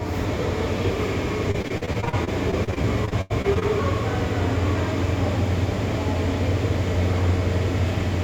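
It's a short sound clip with a burst of repeated packet loss between 1.51 and 3.63 s. Around twenty dropouts, the longest 84 ms, get patched by stretching the previous sound, so about a quarter of that stretch is filler, giving a choppy, robotic texture.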